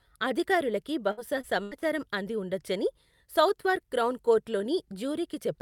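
Repeated packet loss, with its robotic sound, runs from 1.11 to 1.83 s in this speech, just before "అంది ఉండొచ్చని సౌత్వార్క్ క్రౌన్". Audio went missing four times in quick succession, about 180 ms in all, with the longest gap 81 ms. Each hole was patched by stretching the preceding sound, so roughly a quarter of that stretch is synthetic fill. The result is choppy speech with fragments dropped out.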